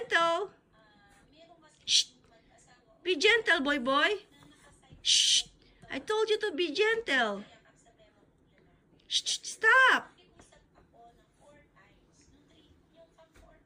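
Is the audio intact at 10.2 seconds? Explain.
Yes, the audio is intact at 10.2 seconds, with no fault at that moment.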